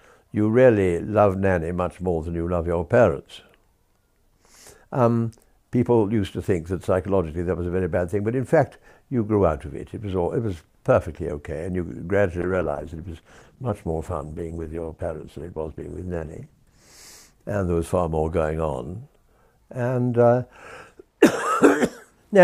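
The audio has a call bitrate drop from 12.43 to 16.87 s, lasting about 4.4 s. The encoder was starved of bits, so the sound turns rough, watery and dull. That fits a fall from around 96 to 13 kbps. Unlike packet loss, the sound never breaks up or goes silent.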